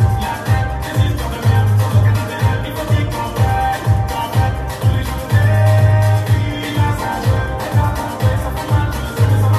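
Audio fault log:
No fault can be heard anywhere in this audio. There is nothing here to log.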